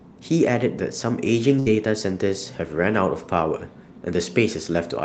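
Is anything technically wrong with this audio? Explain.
Yes. The speech has a burst of packet loss from about 1.59 to 1.68 s. A run of packets never arrived in time, so the receiver stretched the last sound for roughly 66 ms, fading it out, and then resumed with about 60 ms of the speech gone. On a spectrogram the sound freezes and dims before the speech jumps ahead. The waveform shows a shrinking envelope, all below the 8 kHz ceiling of the call codec.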